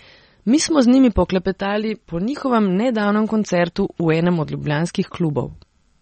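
MP3 compression affects the whole of this speech clip, and the damage is plainly audible. Nothing survives above 8.4 kHz, so the top end sounds dull and s sounds lose their edge. Weak frequency detail flickers in and out from frame to frame, which gives a watery, swirly texture. The likely cause is an encoder short of bits, cutting the treble and discarding quiet components, which fits a bitrate around 32 kbps.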